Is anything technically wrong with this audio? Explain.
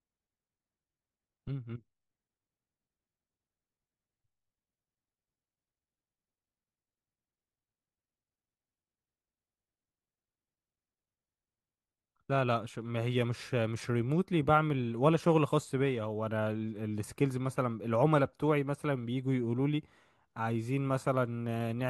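No, nothing is technically wrong with this audio.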